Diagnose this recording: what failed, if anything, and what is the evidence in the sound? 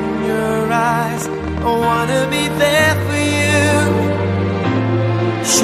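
Interference was likely coupling into the analogue wiring or a faulty connection or power supply, injecting a train of clicks from 1.17 s to 4.77 s. Around twenty similar pulses arrive at an uneven pace averaging 5.3 per second, popping a few dB above the sound, gaps included.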